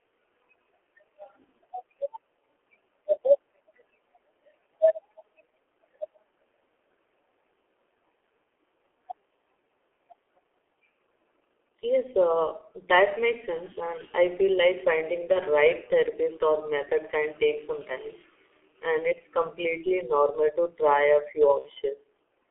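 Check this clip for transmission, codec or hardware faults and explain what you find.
The speech throughout sounds muffled, hoarse and narrow, with smeared consonants, which fits the G.723.1 codec running heavily at a rate consistent with about 6.3 kbit/s. Its 30 ms frames and slowly updated voice model blur fast detail, while the line band keeps only 300 Hz to 3.4 kHz.

At 15.32 to 15.40 s, between "I feel like finding" and "right therapist or method", and at 21.59 to 21.71 s, just after "a few", the speech briefly turns into a stretched, fading sound before recovering weakly. This is VoIP packet loss concealed by the speech codec. About 30 ms and 60 ms of audio went missing, and the decoder filled each gap by extending its last pitch and filter at falling gain.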